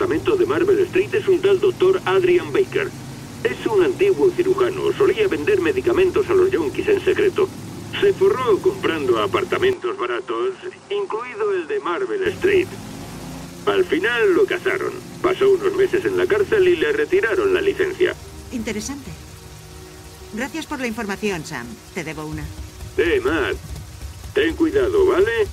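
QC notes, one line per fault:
9.73–12.26 s: input switched to a poorer device. The sound abruptly turns duller and about 5 dB quieter, loses everything above 10.1 kHz, and gains a faint new noise floor, with no gap at either change. The capture likely moved to a narrower-band input.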